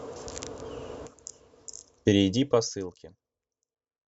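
No technical faults are audible.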